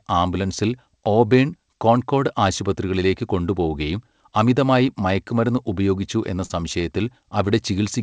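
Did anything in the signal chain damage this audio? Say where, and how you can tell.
Yes, at the network stage: short concealed packet loss at 6.46–6.51 s, just after "അമിതമായി മയക്കുമരുന്ന് ഉപയോഗിച്ചു എന്ന". About 20 ms never arrived, and the decoder stretched the preceding sound to cover it. That produces a brief smear rather than the silent gap of a dropout.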